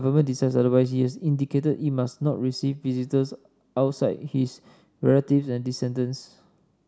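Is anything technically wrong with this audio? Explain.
No, nothing technically wrong can be heard in this speech recording. There is no fault here to point out or explain.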